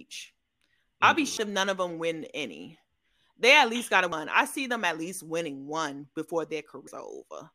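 The recorder likely works in 3 s chunks and drops a piece of audio at each handover, so there is audio missing between chunks at 1.37, 4.12 and 6.87 s. Each time, roughly a third of a second vanishes and the speech skips abruptly.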